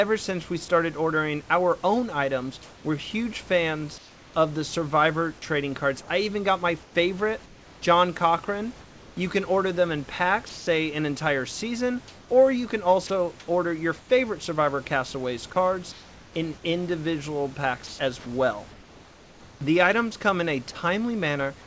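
Between 2.63 and 4.34 s, and again between 6.83 and 9.17 s, 12.08 and 14.09 s, 15.92 and 16.34 s, and 17.87 and 19.61 s, there is comfort noise in place of the background. This is likely discontinuous transmission: in the pauses the sender stops sending, and the receiver fills the gap with smooth synthetic noise. In each stretch, the room noise, which sits about 26 dB below the speech, loses its texture for roughly 0.3 to 1 s. The shortest replacement is 330 ms and the longest is 1020 ms. At 15.92 s the substitute is also about 2 dB quieter than the real background.

Sound dropped by the voice detector occurs at 10.49 to 10.67 s, where about 160 ms of speech is lost, and at 13.07 s, where about 30 ms is lost. The likely cause is that the detector judged the speech to be background and stopped sending. The speech breaks into flat noise and resumes once the detector triggers again. The shorter dropout at 13.07 s falls inside a comfort-noise stretch. 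Throughout, nothing is heard above 8 kHz, which fits a wideband call codec such as G.722.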